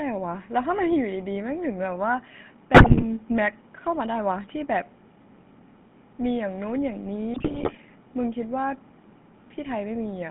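From start to finish the speech has a buzzy, gravelly grain, squeezed into a narrow band of roughly 150 Hz to 3.5 kHz with nothing bright above it. That is the GSM full-rate codec, which fits a 13 kbps stream. It reduces the voice to a vocal-tract filter fed by a sparse, evenly spaced pulse train, keeping only one excitation sample in three, so the rasp is plainly audible.

From 2.74 to 3.04 s, and again from 7.34 to 7.77 s, the voice breaks into squawks, pops and gargling bursts. These are GSM bit errors. Corrupted bits reached the decoder, roughly 6% in the first burst and 5% in the second. Across a run of frames the decoder rebuilt a bent filter shape, a wrong pitch or an inflated gain, so the level and timbre jump erratically for those stretches.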